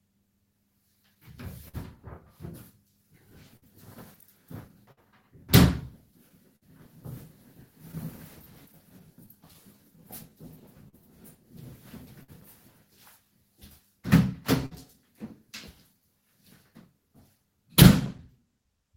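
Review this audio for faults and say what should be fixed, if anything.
Clock drift between sender and receiver runs through the whole clip. The sending clock runs a few percent slow. The receiver's jitter buffer keeps draining. Small timing hiccups recur at uneven spacing. Locking both ends to a common clock, or using adaptive resampling, would prevent it.

Repeated timing corrections span 0.08 s to 18.78 s. The receiver keeps repeating short pieces to wait for the slow sender. Playback runs at about 99% speed. In total, roughly a fifth of a second gets added. Smooth resampling instead of cut-and-repeat edits would prevent this.

Scattered short gaps appear between 1.15 s and 12.30 s. Around fifteen packets arrive late or get lost. Each hole is patched by continuing the last sound. The longest patch lasts up to about 50 ms. The result is brief ticks and smears. A deeper jitter buffer with forward error correction would prevent them.

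A short stall from a late packet occurs at 14.66 s to 14.73 s. The buffer runs empty, so the last sound is held for 52 ms. Playback then resumes from the same place. Nothing is lost, but one sound lingers too long. More buffer headroom would prevent it.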